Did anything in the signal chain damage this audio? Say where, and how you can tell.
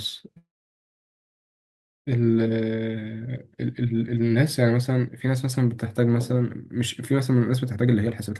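Yes, at two points, both in the call's network and jitter-buffer stage rather than the Opus codec, whose top end stops near 12 kHz.

From 0.37 s to 2.09 s the speech stops dead. The last sound carries on only briefly before dropping to silence for about 1.6 s, then resumes exactly where it left off, with nothing skipped. That is a call audio freeze. The likely cause is packets held up in transit so the jitter buffer ran dry. The receiver stretched the final sound, then fell silent, inserting roughly 1.7 s of extra delay.

From 7.76 s to 8.35 s the speech suddenly sounds rushed, running about 133% of normal speed while the pitch stays put. That is a jitter buffer speed-up. The buffer was holding more audio than its target, so it trimmed many short pitch-period-length slices in quick succession, cutting roughly a fifth of a second to pull the delay back down. The tightened rhythm without any pitch shift is the telltale sign.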